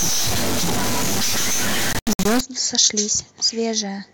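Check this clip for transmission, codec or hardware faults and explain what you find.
Two faults are audible, overlapping near the two-second mark.

From 0.0 to 2.41 s there is a distortion whose likely cause is a stuck bit, one data bit held at a fixed value by a broken line or converter. Roughly half the samples are shifted by that bit's weight in a pattern that follows the waveform, so the pauses fill with a hiss instead of silence. On a spectrogram this shows as broadband energy smeared across the whole band up to 2.41 s. The waveform shows a jagged, stepped offset riding on the signal.

Between 1.93 and 2.26 s the speech breaks up into short silent holes whose likely cause is a Bluetooth dropout, where audio packets missed their deadline at the headphones and were discarded. About 183 ms is missing, scattered over roughly 325 ms, and the longest single gap is 81 ms. The pattern points to several dropped packets. 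Speech resumes further along, as though it kept playing through the gaps. The waveform shows flat-line cuts, and the spectrogram shows matching vertical blank strips.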